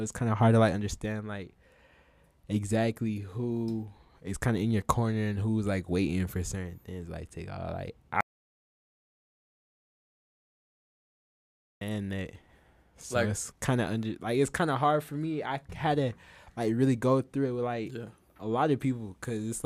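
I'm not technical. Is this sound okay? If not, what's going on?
No. The recording's input was likely cut off, perhaps by a loose connection or an accidental mute, while recording carried on. This audio dropout to silence makes the speech stop dead at 8.21 seconds, leaving total silence until 11.81 seconds. About 3.6 seconds are lost.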